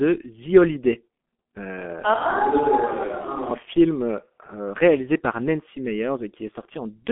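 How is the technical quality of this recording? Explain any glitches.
The recording is of low technical quality. The whole speech clip has passed through a G.723.1 codec, a low-rate internet-telephony coder, and the damage is heavy. It sounds muffled and hoarse throughout. Nothing comes through above 3.8 kHz, and the usable band sits roughly between 200 Hz and 3.4 kHz. The codec models the voice in 30 ms frames and updates that model slowly, so consonants smear together and the voice takes on a rough, buzzy grain, which fits a rate near 6.3 kbit/s. A plain telephone line band-limits in the same way but leaves the voice clean. The hoarseness and blurred consonants are what mark this as the codec.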